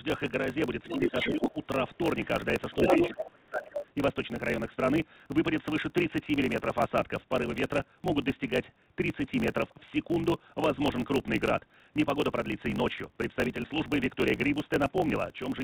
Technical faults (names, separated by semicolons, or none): block size mismatch (truncated); other side's voice leaking through; speech suppressed in double talk